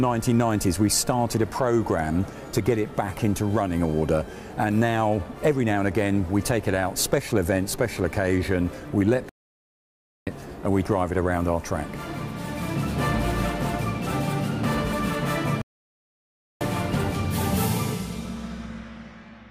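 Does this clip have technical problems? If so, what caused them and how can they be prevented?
Yes: the sound cuts to silence mid-flow from 9.29 to 10.27 s and again from 15.62 to 16.61 s, each gap about one second, before resuming. These are playback stalls, likely the player's buffer running dry or its thread being blocked. Larger playback buffering and a higher-priority audio thread would prevent them.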